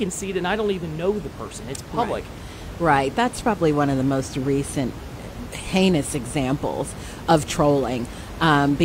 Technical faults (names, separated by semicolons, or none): none